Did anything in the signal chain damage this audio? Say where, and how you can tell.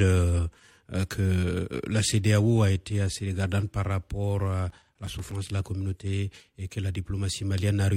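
Yes. At the network and codec stage, the player opened an adaptive stream at a low bitrate and stepped up at 6.0 s. Until then the speech lacks real treble and its top end sounds synthetic, which fits HE-AAC near 32 kbit/s before an AAC-LC rendition around 96 kbit/s.

At the storage and playback stage, CD scratch ticks appear between 4.58 and 5.31 s: seven regular clicks or tiny dropouts, the longest roughly 7 ms. A scratch corrupts data beyond error correction once per disc revolution, so interpolated or muted samples recur.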